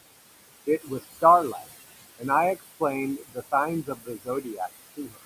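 A speech recording with noise suppressor artifacts running through its whole length. The room noise sits about 13 dB below the voice. The suppressor pulls that background down by about 19 dB in the pauses, then lets it back up under the voice. So the noise pumps with each phrase.

There is also speech cut by the noise suppressor. Here it mistakes quiet parts of the voice for noise and turns them down too. This happens at 0.67 to 0.91 s, by about 10 dB. It happens again at 3.18 to 3.53 s and 3.83 to 4.69 s, by about 20 dB each time. The last cut is at 4.97 to 5.23 s, by about 18 dB. Within each span only short stretches are hit, a tenth of a second or so early on and nearly half a second in the longest. Soft consonants and word endings there sound swallowed or faint.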